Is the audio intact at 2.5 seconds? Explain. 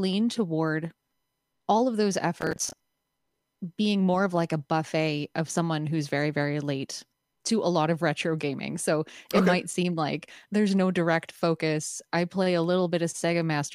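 No. At 2.5 seconds the speech is inside a burst of processor overload crackle running from about 2.41 to 2.94 s. The processor is missing its deadlines for small audio buffers, which sounds like blocks of roughly 10 ms, and around twenty of them fail over that stretch. Each missed block is filled with stale audio that has hard edges, so the speech picks up a gritty, tearing crackle until the load clears at about 2.94 s.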